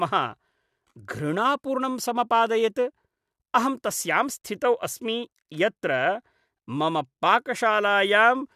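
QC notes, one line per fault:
Nothing to log for this one; I couldn't hear any technical faults anywhere in the speech.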